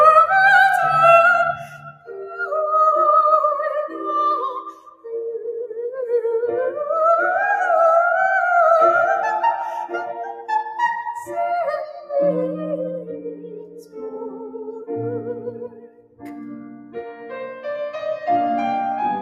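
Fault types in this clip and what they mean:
noise suppressor applied to music or sounds: A noise suppressor built for speech stayed active on this material and treats steady tones, ambience and reverb as noise. Its gain swings by around 10 dB, so held sounds and tails keep sinking while attacks pass, leaving the sound pumping and thinned.
sound cut by the noise suppressor: At certain moments the suppressor judged the sound to be noise and pulled it down harder, by up to about 17 dB, most deeply from 1.55 to 2.47 s and 15.38 to 17.33 s, with shorter dips near 4.7, 10.3, 11.9 and 13.3 s.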